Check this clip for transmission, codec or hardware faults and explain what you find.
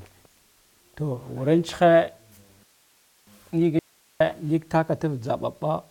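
Two faults are present in this speech clip, both brief interruptions of different kinds.

From 2.63 to 3.27 s there is a rebuffering stall. Playback ran short of downloaded audio and waited about 0.64 s for more. The sound drops to clean silence, then picks up exactly where it stopped. Nothing is missing, which separates it from a dropout.

From 3.79 to 4.20 s an audio dropout to a faint residue removes about 0.41 s of speech. The signal cuts out abruptly and leaves only hiss, roughly 40 dB below the speech. The likely cause is a lost input while the path stayed live. Unlike the stall, content is skipped rather than delayed.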